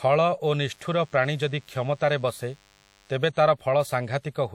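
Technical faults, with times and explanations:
0.70–3.16 s, DECT cordless phone buzz: a faint, thin buzz sits well below the speech, pulsing at 100 Hz because a nearby DECT handset or base transmits a radio burst every 10 ms that the audio circuitry rectifies. Its sharp, harmonic-rich edge sets it apart from mains hum.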